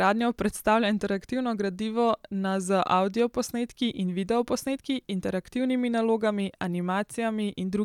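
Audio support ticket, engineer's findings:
No audible faults found.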